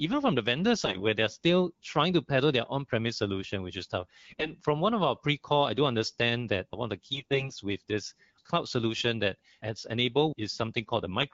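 AMR bit errors at 0.85–1.04 s, 4.29–4.51 s and 7.12–7.51 s flip weakly protected bits and misplace the codec's pulses. The speech keeps its pitch but goes scratchy and gargly, worst around 4.3 s.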